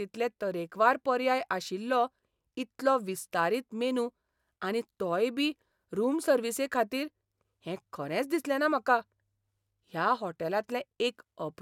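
Nothing technically wrong can be heard in this speech recording: the signal holds steady throughout, with no audible interruptions, distortion or level problems at any point.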